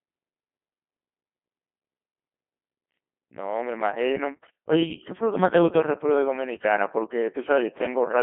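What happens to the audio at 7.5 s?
At 7.5 s the speech is still passing through a Codec 2 vocoder, as it does throughout. The decoder rebuilds the voice from sine waves using only pitch, voicing, energy and a spectral envelope, at what sounds like about 2.4 kbit/s. The result is heavily robotic, buzzy speech, confined to a narrow 150 Hz to 3.6 kHz band.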